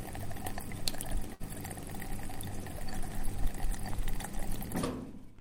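Between 1.33 and 1.42 s there is a burst of packet loss: a run of packets was lost or arrived too late to be played, leaving the receiver to cover a gap of about 59 ms. It did so by carrying the last received sound forward and turning it down as the gap went on, so the sound stalls into a fading continuation. Playback then picks up about 60 ms further on, and the audio in between is gone.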